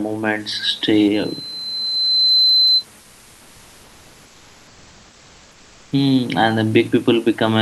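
From 1.14 to 2.85 s, the microphone picks up its own loudspeaker and the loop gain climbs above one at 4.1 kHz, causing loudspeaker feedback squeal. A single piercing tone swells over about a second and a half until it sits roughly 5 dB above the speech.

From 3.01 to 5.91 s, the sender likely stopped transmitting during silence, and the receiver filled the gap with comfort noise in place of the background. The room's natural, textured hiss gives way to a flat, featureless noise about 1 dB quieter, lasting 2.9 s.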